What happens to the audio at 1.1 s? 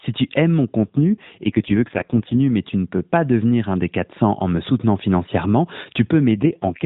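At 1.1 s you're inside an AMR rate drop that runs from about 0.79 to 2.40 s, starting right after "tu aimes mon" and clearing by "mais tu ne peux". The link evidently weakened, so the codec was pushed to far fewer bits for the speech itself, which fits a step from 12.2 down to 4.75 kbps. The band stays the same narrowband mobile width with no gap, but the voice turns buzzier and more synthetic until the rate recovers.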